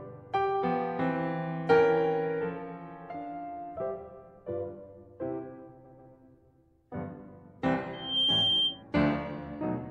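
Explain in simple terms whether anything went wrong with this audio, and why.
Two things go wrong in this music clip.

At 5.84 s there is a stutter from repeated frames. A chunk of about 0.14 s of the compressed audio was played again, twice over, so the music briefly sticks like a scratched record before moving on at 6.12 s. That adds about 0.28 s to the clip, which fits a short run of frames being written or sent more than once. Unlike an echo, nothing fades or overlaps. The same exact slice simply repeats.

From 7.93 s to 8.83 s there is a loudspeaker feedback squeal. A microphone was picking up the speaker it was feeding, and one pitch, around 3.2 kHz, kept looping round and getting stronger. It swells over about a third of a second until it rings out louder than the music. What separates it from a steady electrical whine is this growth from nothing into a piercing single tone, and then it stops.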